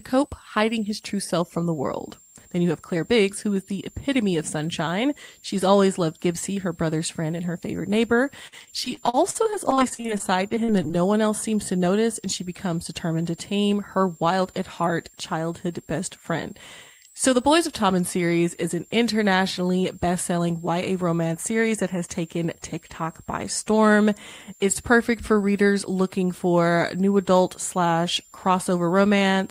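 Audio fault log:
throughout, switching supply whistle: a thin high tone drifting between 7.1 and 7.9 kHz, around 7 kHz, roughly 30 dB below the speech. A power supply cycling in burst mode causes it, and the wandering pitch sets it apart from a fixed-frequency whine or mains hum.
8.47 to 11.03 s, repeated packet loss (robotic sound): around two dozen short holes, the longest 48 ms, each patched by extending the preceding sound, so about a quarter of this stretch is filled-in audio. The rapid succession of repeated fragments gives a choppy, robotic quality, unlike a single clean dropout or silence.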